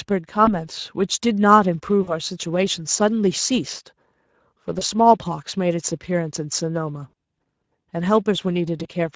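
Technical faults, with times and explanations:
throughout: Speex codec. The speech sounds noisy and hoarse, with a grainy edge, which fits a mid-rate Speex mode of about 16.8 kbps. The CELP coder has too few bits to reproduce the excitation faithfully, even though the band reaches 8 kHz.
0.45–0.53 s, 2.03–2.16 s, 4.79–4.83 s, 7.09–7.13 s, 8.83–8.87 s: VoIP packet loss concealed by the speech codec. Brief gaps of about 20 or 40 ms, consistent with one or two lost frames, become a stretched buzzy or coloured fading sound. The decoder extrapolates its last pitch and filter at falling gain, and the voice stays weak briefly afterward.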